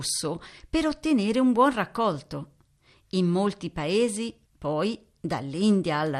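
From the start the speech has a dull, plainly gurgling quality, and that's MP2 compression, likely at a low rate, something around 80 kbps. Layer II splits the signal into 32 sub-bands and shares out bits between them. With this few bits, the upper bands keep dropping out and what's left gets coarsely quantised, so the top end sounds muffled and there's a grainy roughness under everything, very much the low-rate digital radio sound.

Then, right after "molti paesi", from about 4.39 to 4.47 s, there's a quick burst of burbling, which is DAB burbling. Bit errors have slipped past the error correction into the MP2 data, and with a rough error rate of around a tenth of a percent, a couple of frames end up with corrupted data. Wrong samples put short blips of noise into individual sub-bands over the speech.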